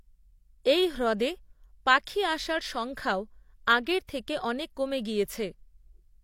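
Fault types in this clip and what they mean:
Pre-echo: a burst of hiss lands just ahead of a sharp onset in the speech at about 4.07 to 4.09 s. The codec spreads the quantisation noise meant for the loud attack across its whole block, so the quiet gap before it fills with noise for about 20 ms and the onset sounds blurred. On a spectrogram it shows as a faint broadband smear before the attack's vertical edge; on the waveform the flat stretch before the attack is fuzzy.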